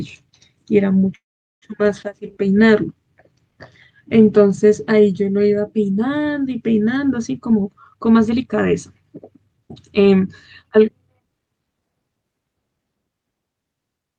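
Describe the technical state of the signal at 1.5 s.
At 1.5 s a call audio freeze (1.15–1.65 s) leaves near-silence: the last sound smears briefly into a fading buzz, likely a jitter-buffer underrun. The spectrogram shows a blank vertical gap before speech resumes.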